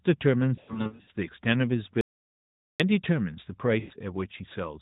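A speech clip carried over a narrowband mobile link, band-limited below 4 kHz with only light codec colouring. It shows lost AMR speech frames twice. Between 0.56 and 1.10 s, radio errors caused frames to fail their checksum and the decoder filled each gap by reusing the last good pitch and vocal-tract settings at falling gain. About 340 ms of audio was lost across a 520 ms stretch, which fits roughly 17 lost 20 ms frames, with the longest run lasting 80 ms. The result is a stuttering series of brief dips and warbles, with the sound stretching out and fading during the longer runs. From 3.80 to 3.93 s, a run of about 100 ms was concealed the same way. That run points to about five frames, and the sound smears and fades before it returns weak or rough. Between 2.01 and 2.80 s, an audio dropout to silence lasts about 0.79 s. The input signal was likely lost while the recording carried on writing silence. 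The sound cuts off abruptly into complete silence, with no room tone, and then resumes mid-flow, so whatever happened in that span is missing.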